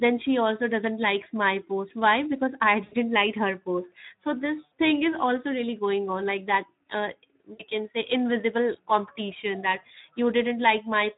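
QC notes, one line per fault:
Throughout: Speex codec. The speech sounds hoarse and grainy, with noise under the speech. The coder has too few bits to model the excitation well, which fits a setting near 11 kbps. Any band above 8 kHz is only a shaped noise fill.
2.83–2.94 s, 4.66–4.69 s and 7.53–7.65 s: VoIP packet loss concealed by the speech codec. Each gap is stretched into a buzzy tone or coloured noise that fades. The decoder repeats its last pitch and filter at falling gain. The second comes after "post so" and before "thing is also really". The third comes after "on like that uh" and before "can say invisible competition". The sound stays weak briefly after each one. The gaps fit about 60 to 80 ms of lost frames.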